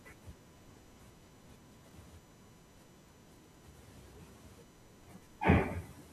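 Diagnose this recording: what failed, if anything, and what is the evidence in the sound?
USB whine runs through the whole recording: a steady 1 kHz tone sitting roughly 30 dB below the speech. The fault is in the analogue wiring, where the USB bus's 1 ms frame activity couples through shared power or ground into the signal path.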